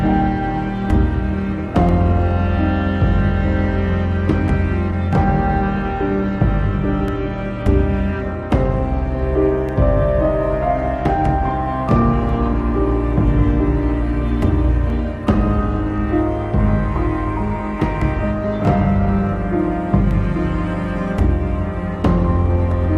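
From 1.89 s to 22.7 s a regular click recurs every 2.6 s, about ten in all, wherever there is sound. These are likely clock drift buffer slips: two clocks differing by roughly 150 ppm, so a buffer periodically drops or repeats a short block of samples.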